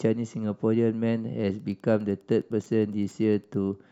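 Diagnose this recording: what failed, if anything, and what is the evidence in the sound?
Wi-Fi interference got in at the analogue wiring stage. From 1.54 s to 3.64 s a faint, steady ticking runs under the speech at about ten ticks per second, spaced 102.4 ms apart and sitting roughly 45 dB below the signal. A nearby Wi-Fi radio's beacon transmissions are being picked up and rectified by the analogue circuit. That fixed 102.4 ms spacing sets it apart from GSM buzz, whose 217 Hz bursts merge into a continuous drone rather than separate ticks.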